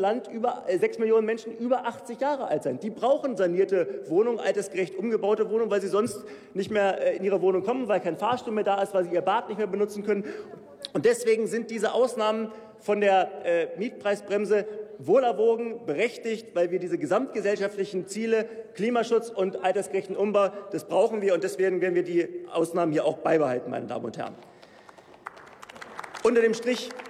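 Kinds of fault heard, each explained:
No faults can be heard anywhere in the audio.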